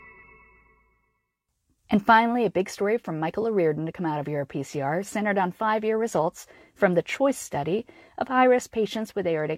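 No technical faults are audible.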